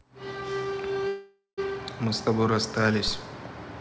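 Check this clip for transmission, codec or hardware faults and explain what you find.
Two faults are present: a call audio freeze and a phantom power thump.

Call audio freeze, 1.08 to 1.59 s: delayed packets likely drained the jitter buffer, so the receiver stretched the last sound into a fading buzz with roughly 0.15 s of silence. The speech then resumes where it stopped, nothing lost, but running about 0.5 s later.

Phantom power thump, 3.08 to 3.26 s: a supply switched on or off on the live input sends a voltage step through the coupling capacitors. It is heard as a deep low thump whose main energy dies away in about 40 ms, against audio carrying nothing above 8 kHz from the G.722 call path.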